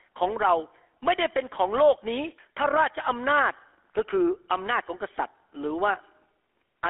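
A buzzy, gravelly roughness runs through the speech from start to finish, with a thin, boxed-in tone: nothing survives below about 300 Hz or above about 3.4 kHz. This is the GSM full-rate codec, and the damage is plainly audible. It models the vocal tract and drives that model with a coarse, regularly spaced pulse excitation, keeping only a fraction of the detail, which fits its 13 kbps rate and produces the grainy texture.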